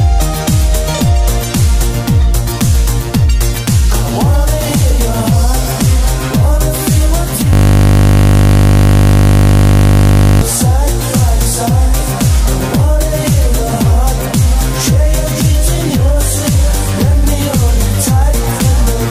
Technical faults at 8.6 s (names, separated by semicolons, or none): system hang loop